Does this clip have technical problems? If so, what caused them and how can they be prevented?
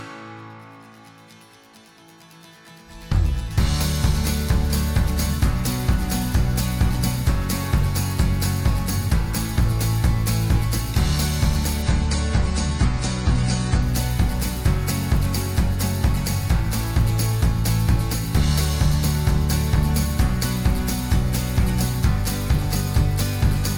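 Yes. From 11.82 to 13.82 s the adaptive stream drops to a lower bitrate: the treble suddenly thins and turns smeary, with nothing above 9.9 kHz, which points to a switch from roughly 96 to 24 kbit/s AAC after the connection slowed. A spectrogram shows the upper band cut off flat for those two seconds, while the waveform runs on without a gap. Buffering further ahead or setting a higher minimum bitrate prevents it.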